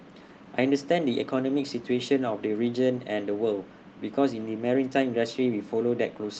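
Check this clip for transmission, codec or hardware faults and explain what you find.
Nothing stood out on listening to this speech recording; it sounds as one would expect after passing through an ordinary call connection.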